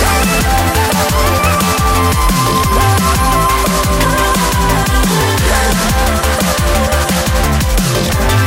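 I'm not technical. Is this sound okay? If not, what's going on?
Yes, nothing in the recording suggests a technical problem with how the sound was captured or delivered.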